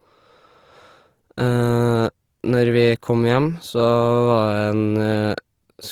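Throughout the speech, the sound is rough and grainy, with a hashy, noisy texture clinging to it, though the top end still reaches about 20.2 kHz. The cause is likely Opus compression in its music mode, which fills bit-starved bands with folded or noise energy and fits a rate around 24 kbps.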